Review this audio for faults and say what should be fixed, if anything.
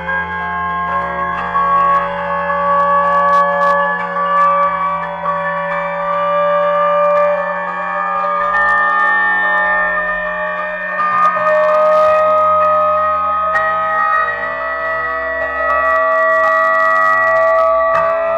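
Hard clipping occurs throughout. Peaks drive about 3 dB past what the chain can pass, so well under one percent of samples are sheared flat, adding high harmonics heard as crackle on loud moments. The waveform shows squared-off tops, and the spectrogram shows thin vertical high-frequency streaks at each clipped peak.

Reduce the gain a few decibels before the overloading stage, or put a limiter ahead of it, so peaks stay below full scale.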